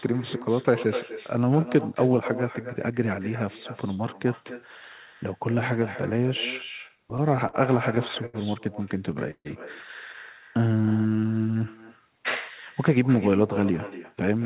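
Right from the start there's echo with no canceller. The far end is clearly playing the call on a speaker and its mic sends it back, so every phrase gets a quieter, thinner shadow about 14 dB down, arriving roughly a third of a second later, the whole way through.

Then come three bursts of repeated stalls (stutter): 6.88 to 7.55 s with seven short gaps, 7.95 to 8.36 s with four, and 8.92 to 9.47 s with four more, the longest about 141 ms. Packets were arriving late, so the buffer kept running dry and the receiver stretched the last sound each time. Nothing is lost, but the speech drags and hiccups.

From 10.57 to 11.66 s there's a jitter buffer slow-down. The receiver was rebuilding its reserve by repeating tiny pitch-period slices, adding about 145 ms. Playback drops to 87% speed at the same pitch, so sounds get drawn out.

Right at the end, 14.13 to 14.41 s, a jitter buffer speed-up trims a few tens of milliseconds to cut excess delay. 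That short stretch runs at 110% speed at the same pitch and sounds a bit hurried. The narrowband, telephone-like tone, with nothing above 4 kHz, fits a G.711 A-law call path.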